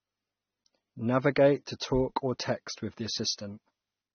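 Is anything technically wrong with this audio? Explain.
Yes, there's a clear problem running through the whole speech clip: it sounds like AAC compression at a low bitrate. Nothing comes through above about 6.3 kHz, so it's dull, and the damage is plainly audible as a smeared, warbly texture with fizzy sibilants. That's the likely cause: AAC-LC squeezing the spectrum against a hearing model, dropping the top end and thinning bands, which fits a bitrate somewhere around 27 kbps.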